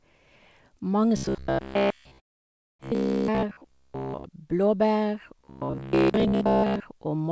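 From 1.17 to 4.24 s the speech goes robotic, a rigid metallic buzz pitched around 67 Hz that still loosely follows the speech. That's likely robotic sound from repeated short buffers: roughly 15 ms chunks replayed for most of that stretch while the real audio gets skipped.

Inside that stretch, from 2.20 to 2.83 s, there's a long network dropout. A short fading tail gives way to near silence for almost 0.6 s, and the speech comes back with that part likely lost in transit for good.

The same buzz returns from 5.39 to 6.80 s, again near 67 Hz, likely the same buffer repetition. Throughout, the G.722 call path leaves nothing above 8 kHz.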